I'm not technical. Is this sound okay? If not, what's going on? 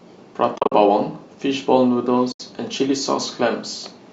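No. The problem is AAC frame loss with muting: pieces of the compressed speech stream never arrived, and the player filled each missing piece with silence, fading the sound out and back in rather than cutting it sharply. Between 0.56 and 0.72 s the speech drops out in several short bursts, the longest roughly a twentieth of a second. At 2.32 s it vanishes once more for 80 ms, returning at 2.40 s. The pieces are short, likely because this is low-delay AAC compression as used in video calls, so the holes are brief and soft.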